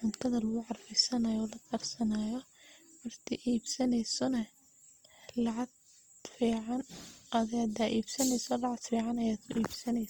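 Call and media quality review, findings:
Low-bitrate music-mode encoding, likely Opus compression in CELT mode, throughout the speech. Encoder short of bits, filling bands by folding lower ones or with noise rather than leaving holes. Result: plainly audible roughness and graininess in the voice, little swirl. Bandwidth still fullband, content up to about 20.2 kHz. Damage level fits roughly 24 kbps.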